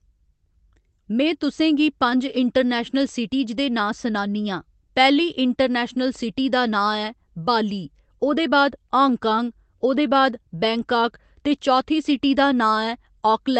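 No technical faults can be heard anywhere in the speech. It has passed through a WebRTC call path with the Opus codec, whose coding noise and top end cut off at 8 kHz can be heard, and its sound points to a bitrate of about 24 kbps.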